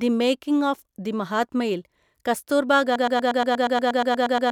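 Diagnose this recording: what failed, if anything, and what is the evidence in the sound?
Broken-record loop, 2.96 s to the end: a 119 ms speech fragment repeats 13 times, likely from a stalled playback buffer resending its last block.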